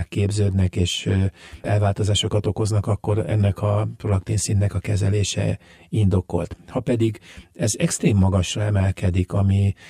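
Speech throughout suffers channel delay (comb filtering): one channel arrives roughly 10 ms late, and summing to mono cancels evenly spaced frequencies from around 40 Hz upward, leaving a hollow, phasey tone. Unlike flanging, the notches stay fixed, and unlike reverb there is no decaying tail.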